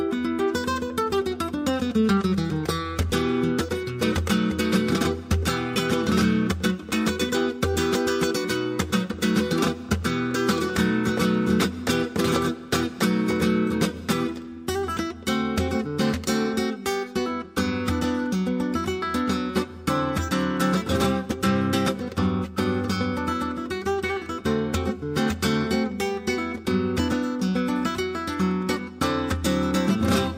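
At 3.10 s the zero line of the signal jumps abruptly, a DC step of about -35 dBFS, as if a converter recalibrated or an offset input were switched into the path. The offset doesn't hold; it bleeds away as a high-pass around 5 Hz pulls the waveform back to centre over a fraction of a second. The jump itself is heard as a single low thump, while the sound carries on unchanged.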